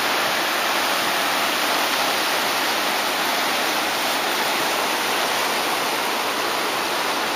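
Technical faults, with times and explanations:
No technical faults can be heard anywhere.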